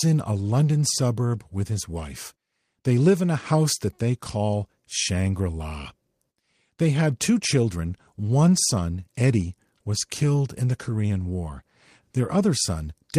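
No technical faults are audible.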